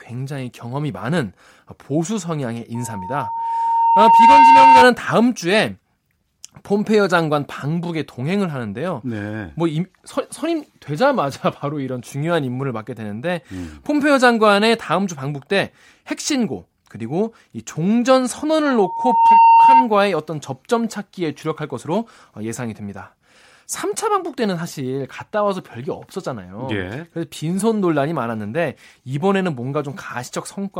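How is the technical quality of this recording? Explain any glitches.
The recording is marred by loudspeaker feedback squeal on two occasions, from 2.74 to 4.89 s and from 18.65 to 19.89 s. Both times a pure tone at 915 Hz rises out of the speech, taking about a second and a half to build the first time and under a second the second time, until it sits about 10 dB above the voice. The microphone was picking up the loudspeaker it fed, and at 915 Hz the loop gain exceeded one, so that frequency kept reinforcing itself.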